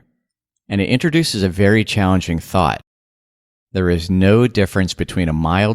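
No technical faults can be heard anywhere in the speech. Nothing in it marks a point in time worth singling out.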